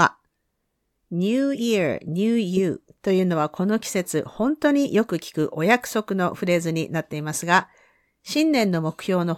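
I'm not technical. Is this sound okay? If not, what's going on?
No, not quite. From about 0.13 s right through to the end there's a faint, steady ticking under the speech, coming roughly every 0.07 s, so it blurs into a soft rattle, around a hundred ticks in all. These are clock slip clicks. Two pieces of equipment are likely each keeping their own time, drifting apart, and every time the gap adds up to one sample, a sample gets dropped or doubled, which makes a tiny tick.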